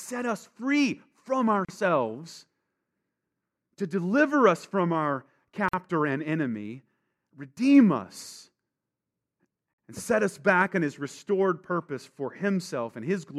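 Separately encoded pieces of this speech were joined without trimming the encoder's start-up delay and last-frame padding, leaving a gap at a join of encoded pieces every 4.0 s. The first falls at 1.65 s, after "us free from", a silence of 36 ms. At 5.69 s, after "deliver us from our" and before "and enemy redeem us", it lasts 49 ms. At 9.73 s, before "and set us back", it is 49 ms. Each is a dropout with smeared edges, after which the speech resumes.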